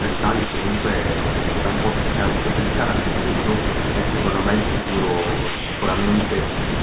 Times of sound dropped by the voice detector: 5.56-5.82, 6.20

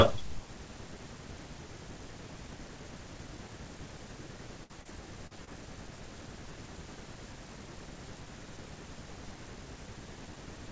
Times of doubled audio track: none

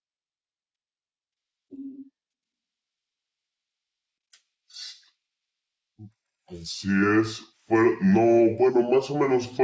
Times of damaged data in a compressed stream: none

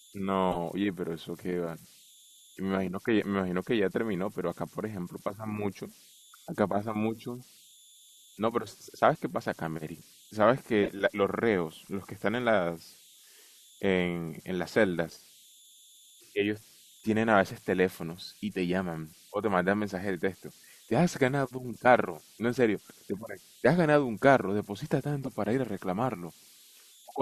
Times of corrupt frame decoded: 0.51-0.57, 10.83-10.88, 25.23-25.29

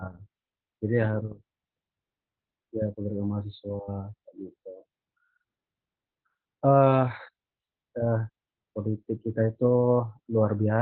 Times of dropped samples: none

